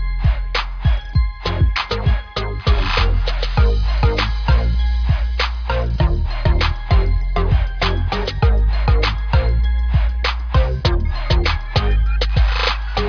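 No technical faults can be heard anywhere in the recording, and the signal stays steady and intact throughout.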